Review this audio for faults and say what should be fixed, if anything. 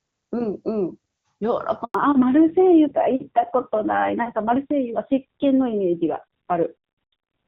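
A handover gap silences the speech from 1.84 to 1.94 s, about 100 ms. No frames arrived while the call switched networks, so that stretch is lost.

At 1.94 s the call falls back to narrowband. The earlier HD Voice band disappears, and nothing above 4 kHz remains through the end. The duller, rougher sound fits a low narrowband rate.

To prevent both, tune the handover so the call stays on a network that supports HD Voice without interrupting the frame stream.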